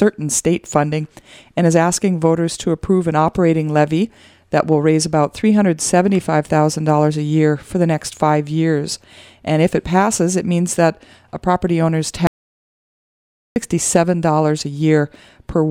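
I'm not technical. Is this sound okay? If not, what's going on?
No. The input likely disconnected briefly, causing an audio dropout to silence: from 12.27 to 13.56 s the sound is completely gone.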